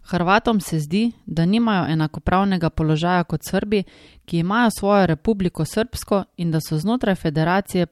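No technical faults are audible in this speech recording.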